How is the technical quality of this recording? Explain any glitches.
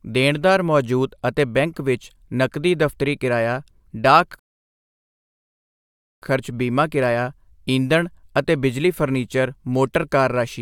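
The speech has one glitch, a rebuffering stall. From 4.39 to 6.22 s the audio drops to silence. The player ran out of downloaded audio and waited for more. Playback then resumes exactly where it stopped. No speech is lost, but the pause adds about 1.83 s.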